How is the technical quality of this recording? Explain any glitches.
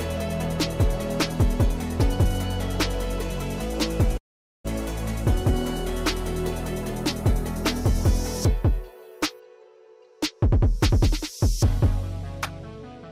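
The recording has one clear glitch. From 4.17 to 4.66 s the sound trails off into a fading buzz, then nearly half a second of silence before resuming slightly late. This is likely a long network dropout: packets stopped arriving, the receiver padded the gap, and about 400 ms of audio was never played.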